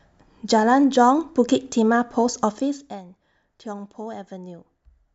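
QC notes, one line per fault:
No faults found in this speech clip. Where the level moves, it rises and falls gradually, like a fader being eased.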